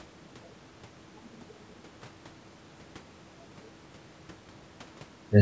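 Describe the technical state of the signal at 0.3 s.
At 0.3 s the speech signal is intact, with no fault present, just the ordinary call microphone processing, whose band stops at about 8 kHz and whose high-pass filter trims the lowest bass.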